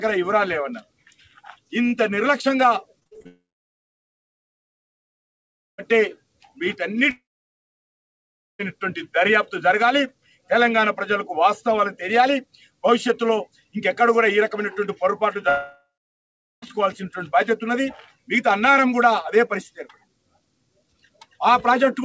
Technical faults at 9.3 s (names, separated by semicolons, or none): none